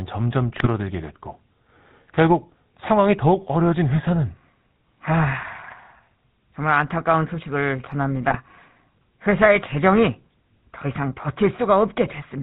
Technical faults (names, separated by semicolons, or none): GSM full-rate codec; GSM bit errors